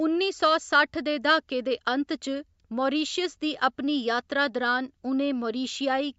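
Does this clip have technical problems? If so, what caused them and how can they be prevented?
No, nothing in this speech recording stood out as a technical problem on listening; the sound has simply passed through a call's microphone processing, which trims the lowest bass and carries nothing above 8 kHz.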